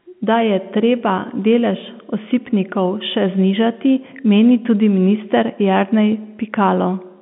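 Telephone-band speech, with no technical faults audible.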